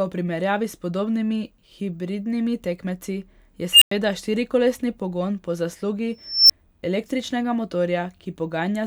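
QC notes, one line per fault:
3.72 to 3.91 s, unstable filter: a high squeal near 3 kHz swells over about 91 ms until it is very loud and clipped, then drops to roughly 99 ms of dead silence. A recursive filter has been fed coefficients that push its feedback past the point of stability, so each pass amplifies the last until the arithmetic overflows and the output is muted while the filter resets.
6.25 to 6.50 s, unstable filter: a second runaway tone, this one higher at around 5 kHz, climbs more slowly over about 252 ms before clipping, and the gap after it is only about 6 ms, heard as a near-instant dropout rather than a pause. The same feedback failure is at work, with the slower build meaning the filter sat closer to the edge of stability before blowing up.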